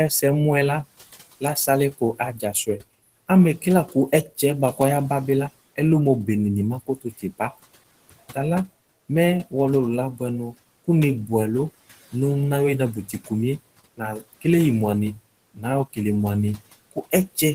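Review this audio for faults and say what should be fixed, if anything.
Speech cut by the noise suppressor occurs at 1.4 to 4.79 s, 6.81 to 8.37 s, 12.94 to 13.31 s, 13.97 to 14.45 s, 15.16 to 15.98 s, and from 16.57 s to the end. The suppressor treats quiet parts of speech as noise. It pulls them down by about 11 to 19 dB. Soft sounds and endings come out swallowed. The room noise sits about 21 dB below the speech, so a gentler suppression setting or better speech detection would prevent these cuts.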